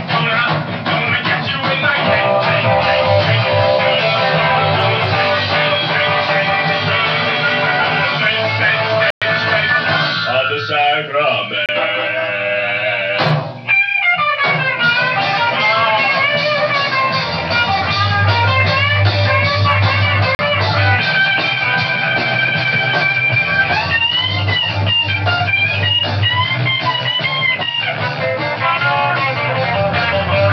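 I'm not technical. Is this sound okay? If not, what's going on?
No. The sound drops to silence three times, then carries on. The first gap starts at 9.10 s and lasts 112 milliseconds. The second is at 11.66 s and lasts 29 milliseconds. The third is at 20.35 s and lasts 41 milliseconds. This is likely a Bluetooth stall. Interference held up the wireless signal. The headphones ran out of stored audio. Playback paused until the delayed pieces arrived again.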